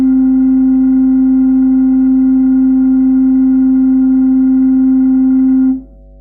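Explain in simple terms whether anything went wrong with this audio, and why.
Something did go wrong: a mains hum runs under the music for the whole clip, from the first moment to the last. It is a steady, low 50 Hz drone beneath the music. The hum comes from the power supply leaking into the recording, typically through a ground loop between connected equipment or from a transformer placed too close to the cables.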